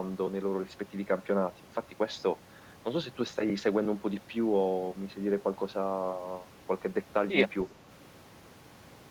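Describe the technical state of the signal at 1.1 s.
At 1.1 s the speech signal is intact, with no audible dropout, distortion, glitch or other technical fault at that point.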